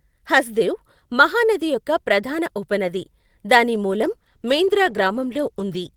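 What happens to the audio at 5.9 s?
At 5.9 s the call bitrate drop is still in effect. It begins at 3.93 s, just after "ఉపనది దాని", and runs to the end. The encoder falls from 32 to 16 kbps and codes more coarsely, so the speech sounds rough and watery. On a spectrogram the fine harmonic detail turns smeared and blotchy.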